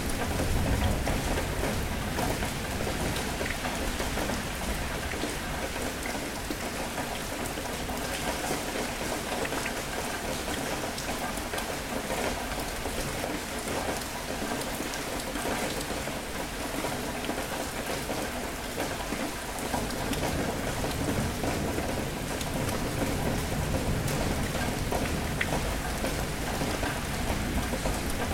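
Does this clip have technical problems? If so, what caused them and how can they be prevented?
Yes. Buffer tearing occurs from 25.77 to 27.22 s as a rattling buzz at 21.5 Hz, which fits a 2048-sample buffer. Writer and reader have slipped, so a small slice of each period replays audio from about 150 ms earlier. Keeping the write position safely ahead of the read position prevents it.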